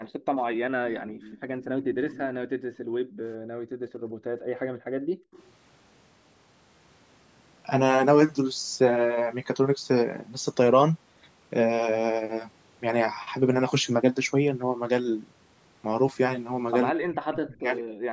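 Right at 0.96 to 1.34 s there's an echo leak: a faint copy of the talker trails about 161 ms behind, around 25 dB down. It's likely the far end's loudspeaker bleeding into their mic, with the echo canceller not catching all of it. The same delayed ghost pops up again briefly at 1.62 to 1.66 s, a bit louder at 1.94 to 2.22 s (roughly 20 dB down), and faintly once more at 5.33 to 5.51 s.

In between, the room tone gets gated by the echo canceller: the canceller clamped the mic while the loudspeaker played. The background dips about 13 dB from 1.34 to 1.52 s, then from 2.5 to 5.33 s it drops as much as 40 dB for around two seconds before recovering.

Near the end, from 16.91 to 17.95 s, speech is suppressed in double talk, likely because both sides spoke at once and the canceller turned down the talker's voice along with the echo. The voice falls away by something like 40 dB for about a second.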